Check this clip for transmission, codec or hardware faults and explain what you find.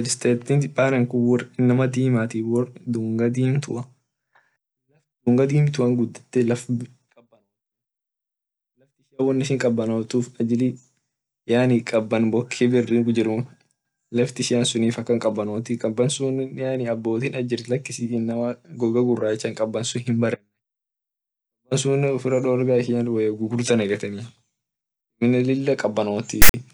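One fault turns up, right at the end of the speech. From 26.42 to 26.54 s a hard-edged burst of loud, lopsided rasping static cuts in, then drops to dead silence. This is file tags played as audio: a text tag block and its zero padding were decoded as samples, so the text bytes produce an offset rasp and the padding produces silence.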